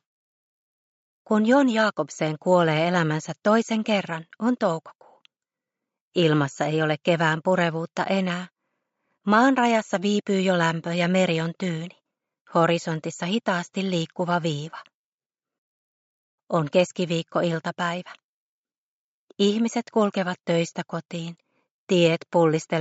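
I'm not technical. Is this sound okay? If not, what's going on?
Yes, this sound is okay, and nothing is going wrong with it.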